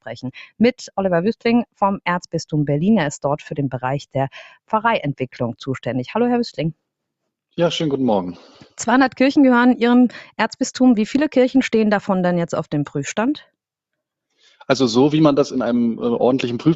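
Sound cut by the noise suppressor at 4.48 to 4.73 s: the suppressor mistook part of the sound for background noise and pulled it down, by about 19 dB at its deepest, for around 150 ms in total, so that stretch sinks before the level recovers. The audio has passed through a call chain and an Opus codec, with nothing above 8 kHz.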